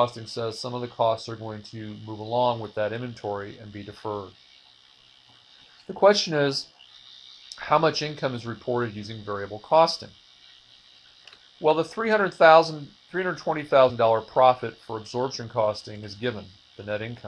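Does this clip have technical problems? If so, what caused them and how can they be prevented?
Yes. At 13.89 s a couple of compressed frames are skipped, so the audio jumps ahead around 50 ms. Verifying file integrity and using error-protected transport would prevent it.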